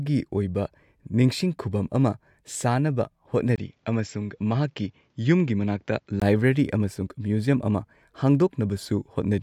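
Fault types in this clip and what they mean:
Input switched to a poorer device: from 3.56 to 6.22 s the speech turns duller, with nothing above 7.6 kHz, drops somewhat in level and gains a faint new noise floor, after a 20 ms gap at 3.56 s, likely a mid-recording change to a narrower-band microphone.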